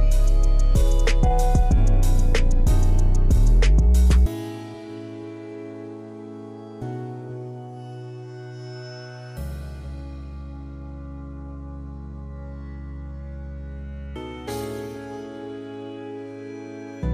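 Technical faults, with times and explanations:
No technical faults heard.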